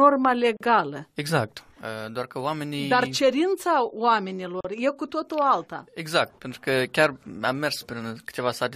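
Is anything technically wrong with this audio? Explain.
Yes. Brief silences cut into the continuous sound at 0.57 s and 4.61 s, lasting about 38 and 40 ms with smeared edges, and the sound then picks up where it stopped. These are gaps at a join of encoded pieces, recurring every 4 s: separately encoded segments were butted together untrimmed, keeping each one's encoder start delay and padded last frame.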